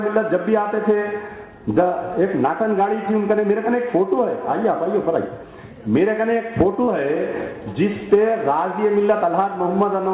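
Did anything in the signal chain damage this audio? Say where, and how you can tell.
Yes. There is a short concealed packet loss from the network stage, at 6.84 to 6.90 s. About 40 ms of audio never arrived in time, and the receiver filled roughly 35 ms of that hole by extending the preceding sound before crossfading back into the real signal. You hear it as a brief smeared or wobbly patch. The band above 4 kHz is empty throughout, which fits a G.711 A-law call path.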